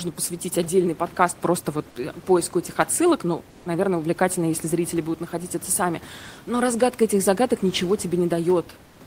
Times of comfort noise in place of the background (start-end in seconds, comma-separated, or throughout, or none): 3.50-3.65, 8.85-9.00